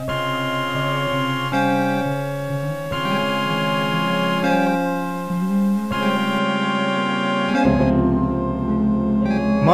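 From the start to 6.38 s, the music has most likely been reduced to a very low bit depth without dither, the samples simply truncated to a coarse grid that fits about 7 bits. Because nothing randomises the rounding, the error tracks the waveform, sitting only about 25 dB below the music. It is heard as a grainy, gritty distortion that shifts with the sound.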